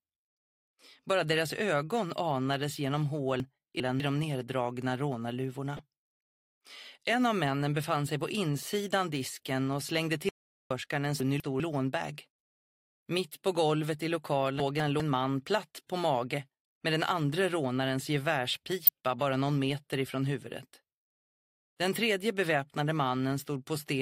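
At 3.4 to 4.0 s, chunks out of order jumble the sound. A 200 ms block plays two blocks late. Nothing is missing, but the sequence is scrambled. There are three hard joins. At 5.77 to 5.79 s, DAB burbling appears. Bit errors slipped past error correction, at a low rate near a tenth of a percent. The brief patch fits about two damaged frames. From 10.29 to 10.71 s, an audio dropout to silence cuts everything for about 417 ms. No room tone remains. A lost input link is the likely cause. At 11.2 to 11.6 s and 14.6 to 15.0 s, 200 ms chunks again play one block late. At 18.84 to 18.89 s, DAB burbling returns, suggesting around eight corrupted frames.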